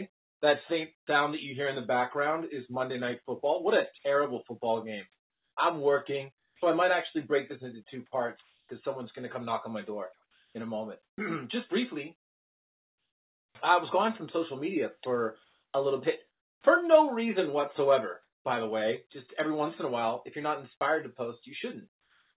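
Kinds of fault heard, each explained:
Comfort noise in place of the background: At 0.98 s the background collapses for about 90 ms into a flat, featureless hiss about 45 dB quieter. From 21.92 s to the end a steady, detail-free noise about 4 dB lower replaces it, likely receiver-generated fill during a transmission pause.
Sound chopped by the voice detector: From 5.12 s to 18.44 s the sound turns choppy, with quiet parts and edges dropping out, about 3.7 s in total. The sender's detector likely kept switching transmission off and on.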